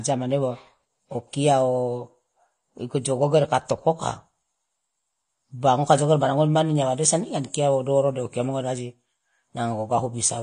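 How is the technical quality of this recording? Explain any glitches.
The technical quality is limited by compression damage across the whole recording. The speech has plainly audible codec artefacts from start to finish. It sounds dull and smeared throughout, with a watery, fizzy edge on sibilants and held sounds, and nothing above 10 kHz. The likely cause is AAC compression, which fits AAC-LC at around 32 kbps. At that rate the encoder drops the top band and quantises the rest coarsely, so detail thins into warble.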